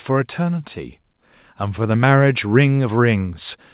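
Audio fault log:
0.36–2.13 s: automatic gain rising. The gain control judged the input too quiet and raised it about 4 dB, so speech and background swell together.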